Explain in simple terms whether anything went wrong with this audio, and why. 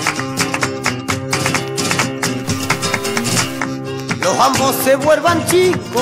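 From 2.45 to 3.6 s the sound turns harsh and buzzy. Noise also fills the quieter moments. This is a stuck bit, likely from a faulty connection or converter. One digital bit stays fixed, nudging about half the samples by a small, fixed amount.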